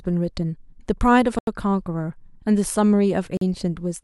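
At 1.39 s an 85 ms block of digital silence cuts in, cutting the sound out and back with no fade; another, 43 ms long, follows at 3.37 s. Their lengths fit dropped 4096- and 2048-sample buffers.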